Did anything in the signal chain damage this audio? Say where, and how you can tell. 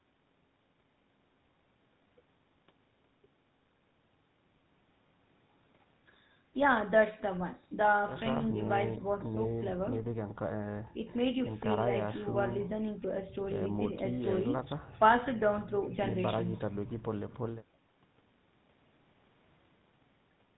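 Yes: buzzy, gravelly speech throughout, with nothing above 3.9 kHz, points to the codec stage. That is GSM full-rate coding, which fits 13 kbps and drives a vocal-tract model with sparse pulses.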